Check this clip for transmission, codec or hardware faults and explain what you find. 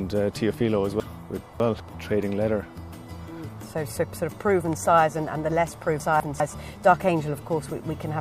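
Chunks out of order occur twice. From 1.0 to 1.8 s, a 200 ms chunk plays three chunks late. From 6.0 to 6.4 s, one plays a chunk late. Each swap leaves hard joins and a briefly jumbled passage.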